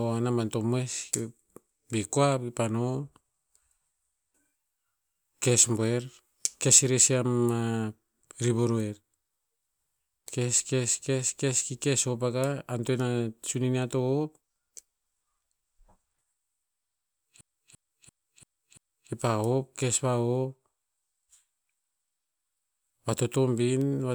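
A speech recording in which, from 17.41 to 19.12 s, one 341 ms fragment repeats exactly five times, a choppy stutter at about 2.9 repeats per second. This is a system hang loop: the system froze while the audio hardware kept replaying its ring buffer, which fits a 16384-sample buffer.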